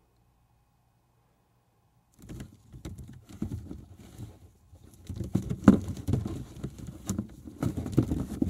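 The recording of sounds shows no technical faults at any point, with the signal holding steady throughout.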